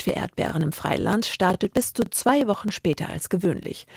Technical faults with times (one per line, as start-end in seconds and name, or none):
0.09-3.96 periodic USB or driver dropouts
0.49-0.52 overlapping chunks
1.02-1.04 overlapping chunks
1.54-1.56 overlapping chunks
2.06-2.09 overlapping chunks
2.59-2.61 overlapping chunks
3.11-3.13 overlapping chunks
3.63-3.65 overlapping chunks